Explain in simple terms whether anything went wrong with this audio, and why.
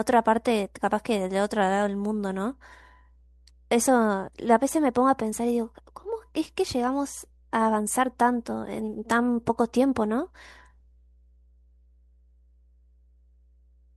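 A low, steady tone runs under the speech for the whole clip. This is mains hum: electricity from the 60 Hz power line leaks into the recording, often through a ground loop or nearby transformer. It sits quietly beneath the speech.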